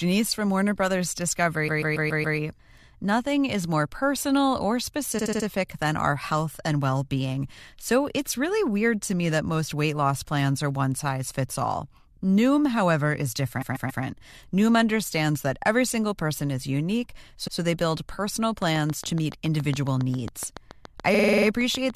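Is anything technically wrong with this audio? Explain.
Yes, there are two faults in this speech.

Repeated frames stutter the speech at 1.67, 5.18, 13.61, 17.46 and 21.13 s. A short block, 46 to 139 ms long, replays between one and seven extra times. This lengthens the audio with a stutter.

A train of clicks runs from 18.62 to 21.91 s. It has around 20 regular ticks at about 7.1 per second, roughly 10 dB above the speech. Equipment interference is the likely cause.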